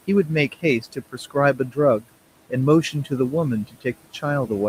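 From the start, noise suppressor artifacts are present: the suppressor estimates the steady background and pulls each band it judges to be noise down by about 18 dB, frame by frame. The room noise, sitting about 18 dB below the speech, therefore dips in the gaps and swells back under speech.

Speech cut by the noise suppressor occurs three times. From 0.81 to 1.36 s, the gain drops by up to about 16 dB across a couple of hundred milliseconds in total; from 1.54 to 1.78 s, by up to about 14 dB over roughly 150 ms; and from 3.67 to 3.86 s, by up to about 15 dB over roughly 100 ms. In each case low-level speech energy was classified as noise and attenuated with the background, so those portions sound swallowed and faint.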